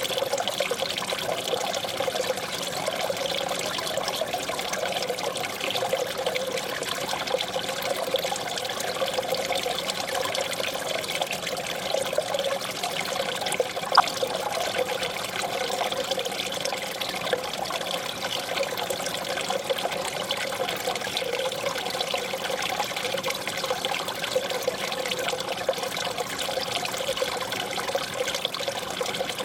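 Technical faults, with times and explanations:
13.95 to 14.00 s, DAB burbling: a brief burst of a few watery blips lasting about 50 ms. Residual bit errors from weak reception got past the error correction into the MP2 audio data, corrupting sample values and putting short blips of noise into single sub-bands. The burst points to a handful of damaged frames at a low error rate, under a tenth of a percent.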